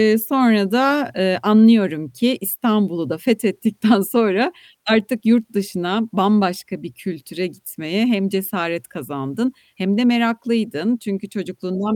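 No technical faults can be heard in this recording.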